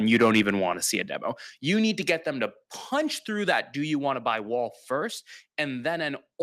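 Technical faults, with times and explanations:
0.12–0.50 s, microphone overload: the opening peaks, just before "want to see a", run about 6 dB past the converter's limit, so a small share of their tops are sliced flat. That squaring adds a harsh, crackly edge to the loudest moments, likely from an input volume set too high for the converter.
1.02 s, microphone volume stepped down: right after "want to see a", the sound and its background drop together by about 4 dB in one abrupt step, likely the call software cutting the device's input level in response to the earlier overload.
2.09–2.12 s, microphone overload: a brief peak goes about 3 dB over and a small fraction of it is flattened, giving a short crackle, likely from the input still being driven too hot.
2.10 s, microphone volume stepped down: between "need to" and "them to punch through", the level falls by about another 4 dB in a single step, likely a second automatic cut triggered by that fresh clipped peak.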